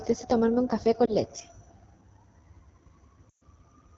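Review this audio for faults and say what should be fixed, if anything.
The whole recording carries AMR wideband (HD Voice) codec damage. The speech is plainly rough and raspy, which points to the 8.85 kbit/s mode, one of the lowest AMR-WB rates. At that rate the pulse excitation and vocal tract model capture too little detail below 6.4 kHz, and the band above is only shaped noise. To prevent it, negotiate 12.65 kbit/s or higher on the link.

Lost AMR speech frames appear twice. From 1.05 to 1.14 s, just after "tomarme un café", there is a brief dip or warble that fits a single lost 20 ms frame. The decoder repeats the last pitch and vocal tract settings at reduced gain. From 3.29 to 3.42 s a longer gap, consistent with about six consecutive frames (120 ms), drops to near silence before the speech returns weak or rough. To prevent it, improve radio conditions or apply stronger channel protection.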